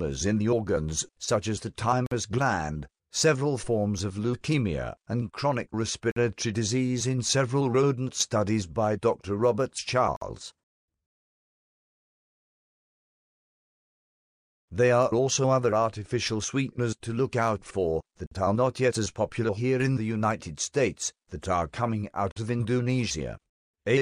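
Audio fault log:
2.06 to 22.36 s, gap between chunks: silent holes of 50 ms open at 2.06, 6.11, 10.16, 18.26 and 22.31 s, each spaced on a 4-second grid. The audio appears to arrive in 4-second blocks, with playback of each new block starting late or preceded by padding, so a stretch of silence is inserted at the join. Nothing is dropped. The sound stops abruptly and resumes where it left off, which gives each hole its hard edges.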